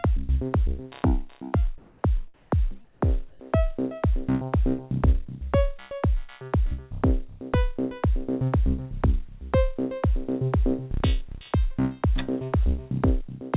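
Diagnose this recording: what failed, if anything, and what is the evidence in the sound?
Call processing: comfort noise in place of the background at 1.78–2.04, 2.34–2.52, 2.84–3.02 and 3.30–3.40 s. Flat synthetic hiss replaces room tone, about 7 dB quieter at 2.84 s, likely from discontinuous transmission.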